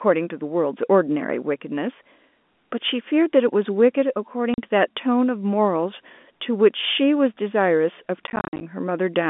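At 4.54 s the audio drops out for 40 ms, and from 8.27 to 8.61 s it breaks up repeatedly, losing 180 ms in total across that 340 ms stretch, with the longest gap 50 ms. This is packet loss filled with silence: the receiver inserts digital silence where packets never arrived, so each gap has hard edges. The gap sizes point to 10 ms packets. The narrow G.711 telephone band is audible throughout.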